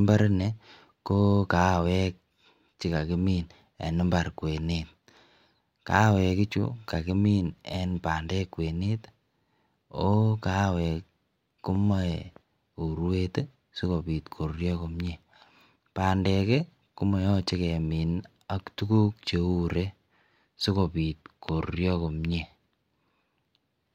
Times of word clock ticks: none

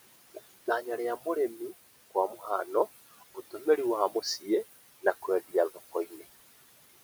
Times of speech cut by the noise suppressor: 0.34-0.86, 1.17-1.71, 2.10-2.69, 3.17-3.78, 4.10-4.47, 5.02-6.24

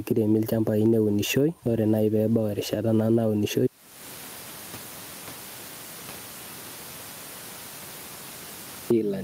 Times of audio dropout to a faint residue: 3.67-8.90

